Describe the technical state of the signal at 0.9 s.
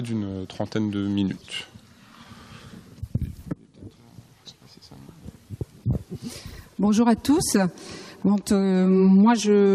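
At 0.9 s the signal is intact, with no technical fault audible at that moment.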